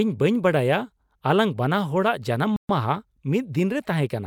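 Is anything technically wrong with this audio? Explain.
Yes, there's one glitch. Between 2.56 and 2.69 s the speech drops out to complete silence for about 130 ms, then carries on. That's most likely a Bluetooth stall: radio interference held up the wireless packets, the headphones' small buffer emptied, and playback had nothing to play until the resent packets landed. So you get a clean hole in the audio rather than crackle or distortion, and the speech resumes right after the gap.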